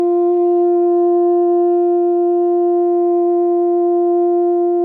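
Nothing to flag on this music clip; no technical fault is audible anywhere in it.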